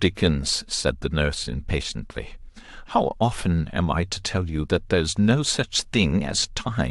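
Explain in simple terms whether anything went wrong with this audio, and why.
Listening to this speech recording, nothing stood out as having gone wrong.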